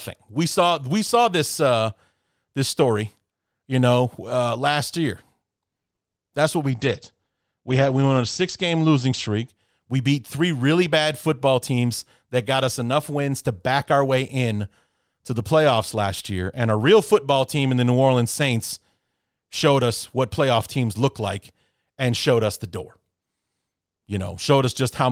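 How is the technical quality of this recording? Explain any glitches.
The speech recording has three network-related glitches in its first 12 seconds.

Short stall from a late packet, 5.95 to 6.02 s: a packet arrived late, and the jitter buffer ran dry. The receiver stretched the last bit of sound for 50 ms until the packet turned up, then resumed exactly where it left off, so nothing is lost. You hear a syllable held slightly too long, with a faint buzz or dip, and the playback delay grows by 50 ms.

Call bitrate drop, 6.72 to 9.54 s, just after "what we": the call's bandwidth estimate fell, and the encoder was pushed from 32 kbps down to 13 kbps, staying at its lowest for about 1.3 s. At that rate it coarsens the coding and narrows the audio band from 20 kHz to 8 kHz. The speech turns muffled and rough and watery, losing its crisp sibilance until the bitrate climbs back.

Jitter buffer speed-up, 11.28 to 11.85 s, between "beat three really bad" and "that got us enough": the buffer had built up more audio than its target, so the receiver trimmed small pitch-period-sized slices again and again to cut the delay, removing roughly 50 ms in total. 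Playback runs at 107% speed with the pitch unchanged, so that stretch of speech sounds slightly rushed.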